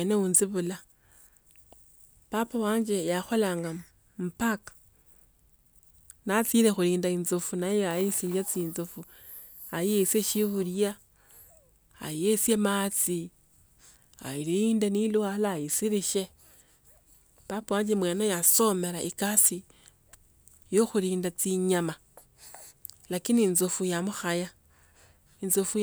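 No technical faults can be heard anywhere in this speech recording. There is no point in the audio that needs a timestamp or a note of a problem.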